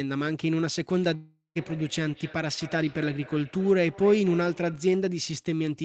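From 1.01 s to 4.99 s there's feedback echo between two devices: the speech loops back about every 0.3 s, thin and ringy, peaking at about 18 dB below the talker. At 1.15 s the sound smears into a fading buzz, then goes silent until 1.57 s, likely a long network dropout that loses about 0.4 s outright.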